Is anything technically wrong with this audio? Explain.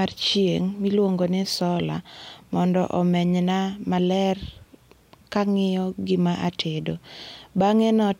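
No, nothing technically wrong turns up anywhere in this speech recording.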